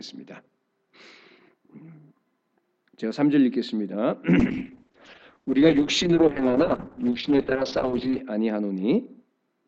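A call bitrate drop runs from 4.41 to 8.27 s, with the worst stretch lasting about 3.8 s. The encoder's bandwidth estimate collapsed, so it was forced to spend drastically fewer bits on each frame. The audio turns coarse and watery, and its top end is cut from 20 kHz to 8 kHz, leaving it muffled. That degree of loss fits a fall from around 128 kbps to roughly 7 kbps before the rate recovers.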